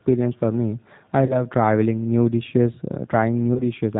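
Speech runs throughout with G.729 codec damage that is plainly audible: nothing above 4 kHz, and a rough, slightly synthetic texture that fits an 8 kbit/s coder. Plain telephone band-limiting would sound dull but clean, while this roughness comes from rebuilding the sound out of a coarse vocal-tract model and sparse pulses. VoIP packet loss concealed by the speech codec appears at 1.26 to 1.43 s, between "for me I" and "traveling new dishes", and again at 3.54 to 3.64 s. Instead of a silent gap, the sound smears into a buzzy tone or coloured noise that fades, lasting longer than the roughly 30 ms and 20 ms of audio that went missing, because the decoder takes time to recover.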